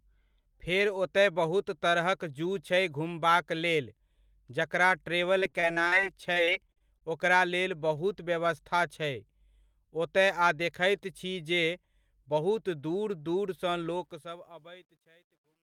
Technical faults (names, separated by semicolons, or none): repeated packet loss (robotic sound); truncation distortion on a fade